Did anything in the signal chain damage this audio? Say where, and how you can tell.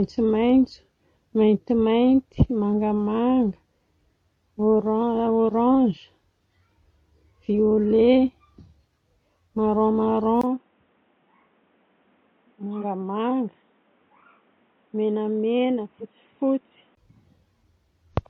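Yes. Compressed frames skipped, codec or storage stage, at 5.92–5.97, 12.80–12.84 and 16.00–16.02 s: about one 46.4 ms frame drops out each time, so the audio jumps ahead at each point.

Between 10.41 and 16.97 s the audio dulls, with nothing above 3.8 kHz, a 20 ms gap, a level about 5 dB lower and new noise, likely from an input switched to a poorer device.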